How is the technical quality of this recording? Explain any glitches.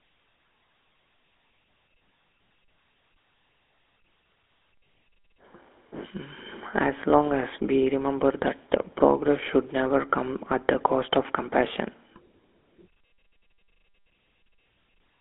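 The speech has been through a low-grade mobile phone codec and carries its damage throughout.

GSM full-rate codec, for the whole clip: the signal is squeezed into a band of about 300 Hz to 3.5 kHz, then rebuilt from a coarse model of the vocal tract excited by a sparse, regularly spaced pulse train. That decimated excitation is what you hear as a plainly audible buzzy, gravelly roughness over the thin, boxy telephone tone, consistent with a 13 kbps GSM full-rate link.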